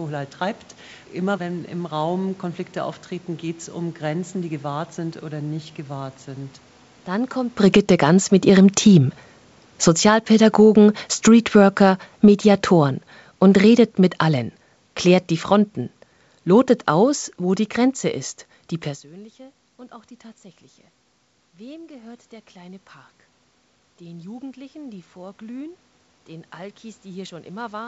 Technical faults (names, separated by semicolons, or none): automatic gain falling; automatic gain rising